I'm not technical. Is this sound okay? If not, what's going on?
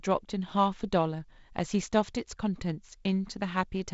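Yes, nothing's wrong here.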